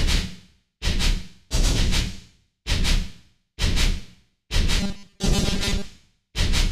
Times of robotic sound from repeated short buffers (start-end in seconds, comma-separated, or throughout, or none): 4.80-5.84